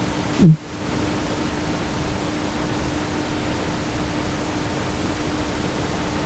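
Gain pumping runs through the whole speech clip. The room noise sits about 29 dB below the speech, and the gain swings by roughly 5 dB. The likely cause is input gain set far too high, with a fast limiter or compressor clamping down on each peak. That squeezes loud and quiet passages together and leaves the speech sounding squashed, above a call path whose audio stops at 8 kHz.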